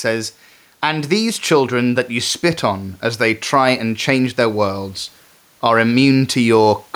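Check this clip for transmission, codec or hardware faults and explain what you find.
One fault runs through the whole speech recording: gain pumping. The faint room noise sits about 40 dB below the voice, and the gain swings by roughly 5 dB, pulled down under each loud syllable, likely from excessive input gain reined in by a fast limiter.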